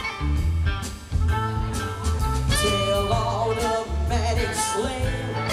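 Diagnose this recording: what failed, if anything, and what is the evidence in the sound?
Nothing failed: no stage in the chain leaves a mark that can be heard anywhere in the recording. Across the whole clip the sound holds steady, with no breaks, jumps or added noise to point at any part of the path.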